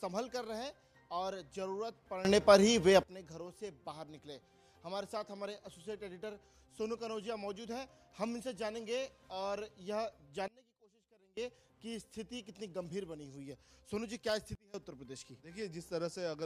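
At 2.25 s the level leaps up about 17 dB until 3.03 s. It drops about 24 dB from 10.48 to 11.37 s, and again from 14.55 to 14.74 s. Background and sound shift together, instantly. This is a sudden gain jump, likely a gain setting applied without a ramp.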